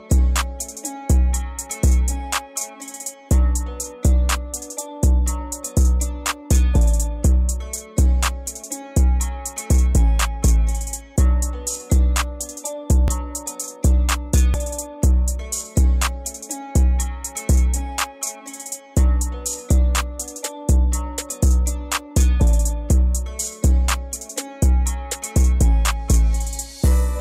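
At 13.08 s and again at 14.54 s the sound jumps abruptly, as if roughly 40 ms had been cut out and the two edges butted together. The likely cause is a dropped buffer (overrun), where incoming samples were overwritten before the software collected them. Unlike an underrun, which leaves a brief gap of silence or a stutter, nothing is inserted here; the audio simply skips forward.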